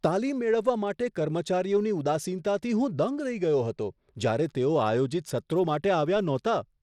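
Throughout the clip the speech carries the marks of Bluetooth SBC compression, likely from a link running at a low bit pool, which fits a rate of around 96 kbps. The sub-band coder has too few bits to share, so the upper bands are starved and the rest are quantised coarsely. The damage is plainly audible: the treble thins and flickers, nothing survives above 16.9 kHz, and a gritty, aliased noise rides along with the speech.

At 6.16 s the waveform's zero line jumps in a single DC step, as if an offset were suddenly switched into the signal path. A high-pass stage around 5 Hz then pulls the offset back to zero, so it dies away rather than holding. The jump is heard as a brief low thump or click, while the speech itself carries on through it without a break.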